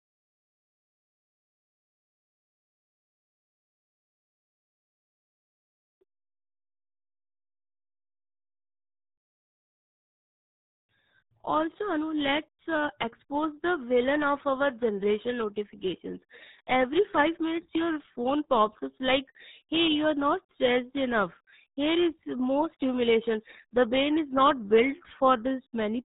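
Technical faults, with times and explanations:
Throughout, RealAudio 14.4 codec: the speech is muffled and gargly, with nothing getting past about 3.8 kHz. The codec squeezes everything into a tiny bit budget, which fits an 8 kbit/s dial-up rate, so it discards the highs and smears the rest.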